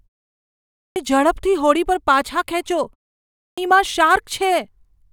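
At 0.75 s, after three quarters of a second of silence, the speech jumps in abruptly: a clipped start after a pause, with about 0.21 s swallowed while the output wakes. It happens again at 3.36 s, just after "પાછા ખેંચો" and a 0.49 s gap, cutting about 0.22 s.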